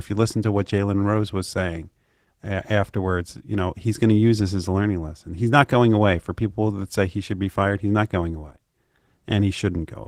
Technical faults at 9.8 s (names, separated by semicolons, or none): Opus voice compression